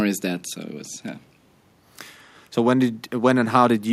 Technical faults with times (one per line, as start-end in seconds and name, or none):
none